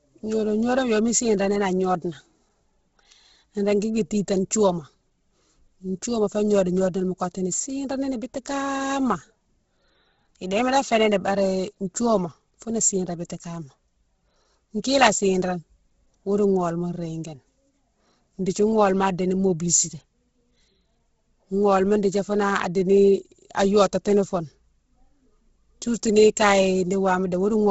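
From start to finish the speech carries heavy codec damage, most likely Bluetooth LC3 compression. Nothing reaches above 7.7 kHz, so the top end sounds cut off. Below that, the upper band is thin and noisy. Much of its detail has been discarded and replaced with filler noise. Consonants and vowels take on a breathy, grainy edge. The level of smearing fits a rate near 16 kbps with 10 ms frames.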